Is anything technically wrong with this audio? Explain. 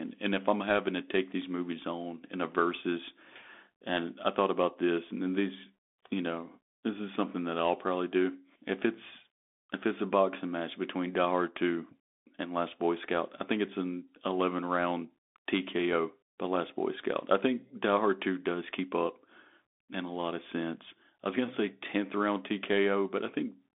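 Yes, it's been through a Bluetooth CVSD headset codec for the whole clip. The speech sits in a narrow band from about 250 Hz to 3.6 kHz, with nothing above 3.8 kHz, which fits a 64 kbps CVSD link. Because it codes each sample as a single up-or-down step, loud high sounds outrun the step size and distort, s sounds come out scratchy, and a granular hiss sits under the speech.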